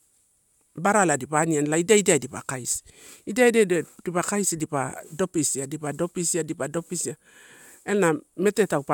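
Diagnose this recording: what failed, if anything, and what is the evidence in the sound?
Nothing failed; no stage shows any audible fault here.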